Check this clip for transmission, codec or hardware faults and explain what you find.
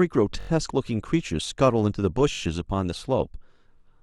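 One fault is audible. From 0.41 to 0.49 s a tiny slice of the speech stutters, the same piece sounding five times over with a hard join at each restart, a brief buzzy rattle. This is a repeated buffer: fresh audio arrived late, so the device replayed its last roughly 21 ms block four extra times. That length fits a 1024-sample buffer, and essentially no audio seems to be lost.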